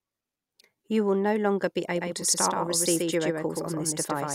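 A second, slower capture path or an out-of-step edit has likely mixed the speech in twice, producing a doubled audio track from 1.95 s, just after "will no longer be", through to the end. The copy trails the original by around 150 ms and sits roughly 5 dB lower. It has full bandwidth and no room decay, so it arrives abruptly as a dry echo.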